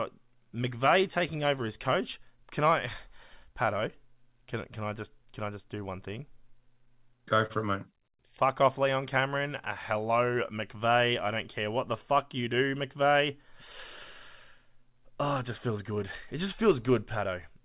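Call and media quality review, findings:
Short stall from a late packet, 7.46–7.52 s. Sound held about 37 ms with slight buzz or dip. Jitter buffer underrun: last audio stretched until the packet arrived, then resumed at the same point, so nothing is lost, unlike concealed loss. Playout delay grows about 37 ms.

Short concealed packet loss, 7.54–7.57 s, right after the stall. Brief smear or wobble. Decoder concealment: 20 ms never arrived, hole extrapolated from preceding sound and crossfaded back. Audio is missing here, not just delayed and held.

Jitter buffer speed-up, 12.38–12.79 s. Speech hurried at unchanged pitch, running at 109% of normal speed. Buffer over target, so pitch-period chunks are cut repeatedly, about 50 ms in total. Tempo-only change with no dropout, unlike packet loss. Call path band-limited to 4 kHz, consistent with narrowband G.711 A-law.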